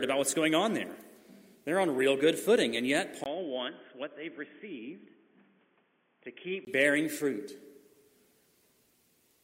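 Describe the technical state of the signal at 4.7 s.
At 4.7 s you're in the middle of a stretch from 3.24 to 6.67 s where the sound goes dull and boxy, with nothing above 3.4 kHz, a few decibels quieter, and a new, faint noise floor sitting well under the signal. It starts with a brief 20 ms dropout. That's most likely an input switched to a poorer device, a narrowband mic path with its own tone, gain and hiss, before the original input comes back.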